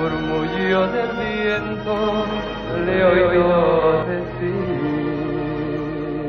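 From 1.97 s to 4.03 s the audio is a doubled audio track: a second full-band copy, about as loud as the original, trails it by roughly 150 ms, giving a hard slapback with no reverberant tail. It is likely caused by the signal being captured again through a slower path. On a waveform every transient appears twice, a fixed gap apart. A spectrogram shows each event repeated as a ghost stripe, starting and stopping abruptly at the segment edges.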